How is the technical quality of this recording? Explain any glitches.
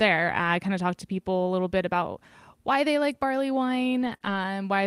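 The recording has packet-loss damage in two places, near the start and close to the end.

Lost packets rebuilt from error correction occur at 0.39–0.49 s, just before "kind of talked to", at 4.01–4.15 s, after "why they like barley", and at 4.22–4.40 s. The rebuilt spans are about 60, 80 and 100 ms long. Each missing stretch was replaced by a low-bitrate copy carried in the following packet, so there is no gap, but those frames sound rougher and noisier.

A short concealed packet loss falls between the last two events, at 4.17–4.22 s. About 20 ms never arrived in time, and the decoder covered it by extending the preceding sound for about 26 ms before blending back. The result is a brief smear or wobble in that spot.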